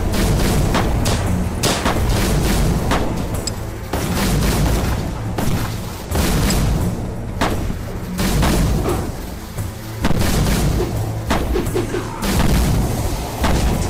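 No technical faults can be heard anywhere in this recording. There is nothing in the audio that calls for a timestamp or a closer look at the signal path.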